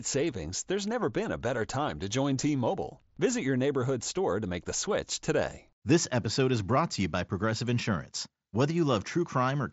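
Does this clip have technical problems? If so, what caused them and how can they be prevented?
No, nothing in this speech clip stands out as a technical problem. It comes through a Bluetooth mSBC headset codec, which leaves nothing above about 7.7 kHz and a light graininess on the louder sounds.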